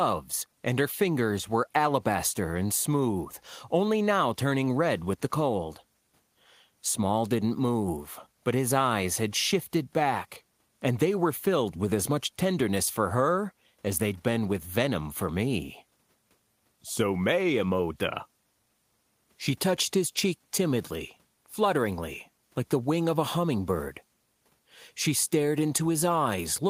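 Nothing technical goes wrong anywhere in this speech recording, so there's nothing to flag at any point along the way.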